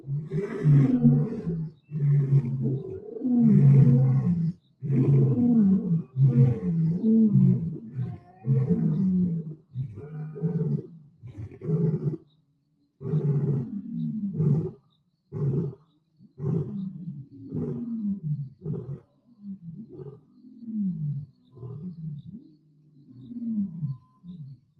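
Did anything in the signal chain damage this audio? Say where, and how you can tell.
Yes. There is a noise suppressor applied to the sounds throughout, in the call-processing stage. Gain swings by roughly 15 dB as a speech-tuned suppressor treats steady tones and decaying tails as noise. Onsets pass, but held material pumps and thins. The Opus path itself, band-limited near 12 kHz, just carries this damage.

Sound is cut by the noise suppressor at 0–0.36, 1.33–3.09, 4.53–4.83, 7.7–8.47, 9.42–13.01, 14.74–17.34 and 18.49 s to the end. The level drops by about 12 to 13 dB in these spans. Sustained and fading sounds sink or end early, while sharp transients survive.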